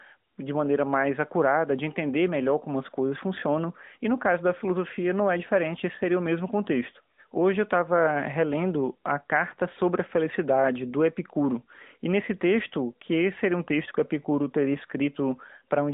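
No faults found in the speech: the band stops around 3.7 to 3.8 kHz with light codec colouring, which fits an AMR-NB narrowband mobile link at 12.2 kbps.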